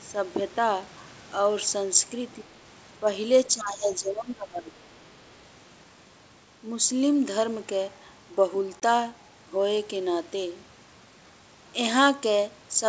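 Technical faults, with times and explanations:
2.44 s, and 3.50 to 5.13 s, speech suppressed in double talk. The speech level drops, by about 10 dB at the brief first dip and about 20 dB in the longer stretch. The likely cause is the echo canceller mistaking this talker for loudspeaker echo and turning both down.
8.80 to 8.82 s, packet loss on an ADPCM call. A 20 ms hard-edged silence cuts into the speech, which fits one lost packet. The decoder's predictor and step size then lose sync with the sender's, so the returning sound needs a moment to settle.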